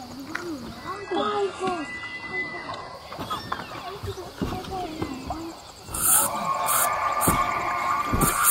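From 0.95 s to 2.95 s the audio suddenly loses its top end, with nothing left above about 11.5 kHz, and codec artefacts thicken. Quality then snaps back without any gap. This is an adaptive stream at a lower bitrate: when the connection slowed, the player switched for two seconds to a leaner version of the stream, which fits a drop from roughly 96 kbit/s AAC to a 12 kbit/s HE-AAC encoding, before recovering.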